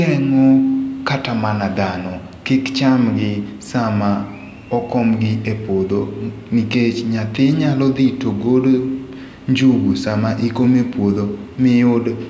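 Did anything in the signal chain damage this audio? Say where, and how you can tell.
No, nothing in the signal chain damaged this recording.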